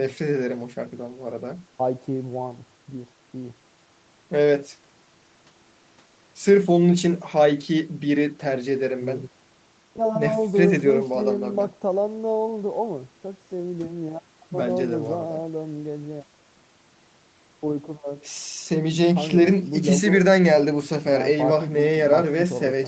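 No technical faults detected.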